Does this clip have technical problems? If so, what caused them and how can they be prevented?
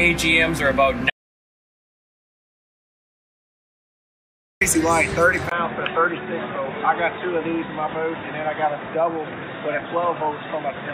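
Yes. An audio dropout to silence runs from 1.10 to 4.61 s, showing as a dead-flat waveform with a blank spectrogram. The input was likely lost while the recorder kept writing zeros. Securing connections and disabling automatic muting prevents this.

At 5.49 s the input likely switched to a poorer device. There is a 20 ms gap, then the spectrogram is cut off above 3.8 kHz, the level falls about 5 dB, and a new noise floor sits about 35 dB down. Locking the recording input stops such switching.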